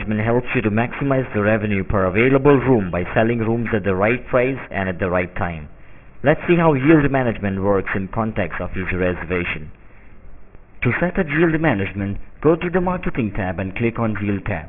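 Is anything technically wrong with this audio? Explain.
Yes. Aliasing runs through the whole clip. The high end sounds gritty and metallic, with harsh tones that don't follow the pitch of the sound, and the spectrum stays crowded right up to a hard edge at 3 kHz. That fold point fits a sample-rate drop to about 6 kHz with no filter to remove content above half the new rate. Everything above 3 kHz mirrored back down to wrong frequencies, and those false components sit fairly loud, roughly 15 dB below the signal.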